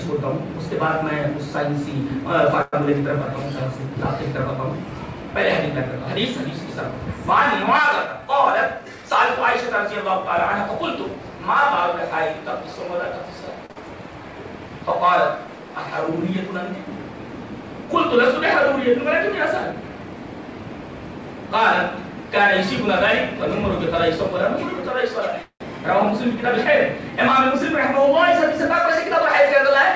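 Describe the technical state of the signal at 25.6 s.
At 25.6 s a call audio freeze is ending. It spans 25.43 to 25.62 s. Delayed packets likely emptied the jitter buffer. The last sound fades as a buzz or hiss, then 90 ms of silence. Playback resumes where it stopped, nothing lost, 177 ms late.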